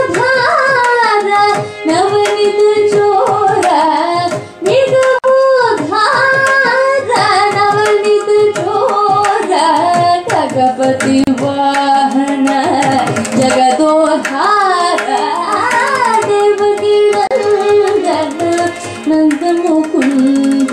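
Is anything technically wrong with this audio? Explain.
Yes. The sound drops out three times, at 5.19 to 5.24 s (about 52 ms), 11.24 to 11.27 s and 17.27 to 17.31 s (about 34 ms each), each a short hole with smeared edges, after which the audio resumes exactly where it left off. The roughly 6 s spacing points to gaps at joins of encoded pieces: separately encoded chunks spliced without trimming the encoder's leading delay and final-frame padding.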